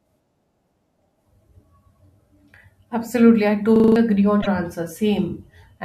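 From 3.76 to 3.96 s a system hang loop repeats one 40 ms slice five times, a 25 Hz buzz. The waveform shows identical repeated blocks and the spectrogram shows vertical stripes, with about a fifth of a second of speech lost.

At 4.40 to 4.47 s the speech jumps ahead, likely a broken MP3 bit reservoir after lost 26 ms frames.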